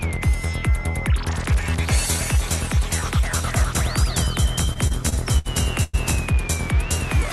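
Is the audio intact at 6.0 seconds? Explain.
No. From 3.44 to 6.18 s a doubled audio track is present: the same audio was likely captured a second time by a slower path and mixed in, so a full-band copy about 5 dB quieter trails roughly 200 ms behind, dry and without room colour, and cuts off abruptly at 6.18 s.

Just before, from 5.83 to 5.95 s, there is a call audio freeze, likely from delayed packets draining the jitter buffer. The receiver stretched the last sound into a fading buzz or hiss for 101 ms, then resumed where it stopped, so nothing is lost but everything after runs about 0.1 s late.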